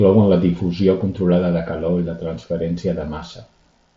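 Nothing here needs fixing: it's just speech carried over a Bluetooth mSBC headset link, so the top end stops at around 7.7 kHz, as that wideband codec is built to do.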